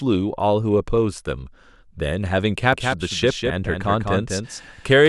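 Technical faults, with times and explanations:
2.73 s to end: doubled audio track. A second full-band copy of the speech cuts in abruptly and runs roughly 200 ms behind the original, about 5 dB quieter, with no decay or room colour, likely from a slower second capture path mixed in.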